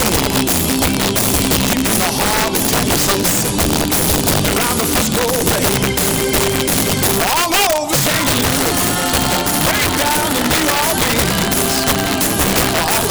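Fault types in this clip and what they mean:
Integer overflow: the signal was driven about 10 dB past the largest value the integer format can hold, and instead of being limited, each over-range sample wrapped around to the opposite extreme. Only a small share of samples, roughly one in twenty, exceed the limit, but every one of them leaps across the full range. Throughout the clip, loud peaks break into violent, harsh cracks, far sharper and more abrasive than ordinary clipping.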